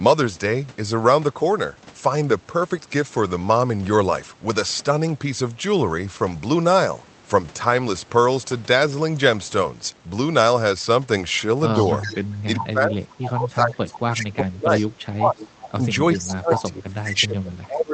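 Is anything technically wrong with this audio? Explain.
Yes. From 11.8 to 12.34 s, 13.12 to 13.3 s, 14.78 to 15.05 s, 15.4 to 15.71 s and 16.14 to 16.62 s, an echo leak is audible: a copy of the speech about 0.4 s late, roughly 10 to 25 dB down. One side likely had a loudspeaker whose canceller let it through.

From 12.08 to 15.81 s and 16.17 to 17.93 s, the speech dips by up to about 25 dB. This is speech suppressed in double talk, likely because the canceller ducked everything while both sides spoke.

The audio also passes through an Opus call path, with a band limit near 8 kHz.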